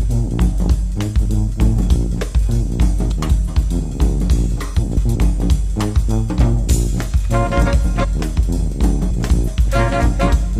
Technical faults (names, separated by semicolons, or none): frames out of order